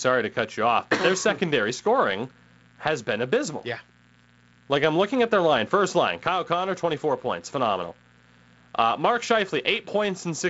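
Switching spikes from a dimmer, rectifier or unshielded line, arriving twice per 60 Hz cycle, have leaked into this wideband-telephone speech recording as mains buzz: a steady, raspy hum roughly 35 dB below the speech, running the whole clip beneath the G.722 band that stops near 7.7 kHz.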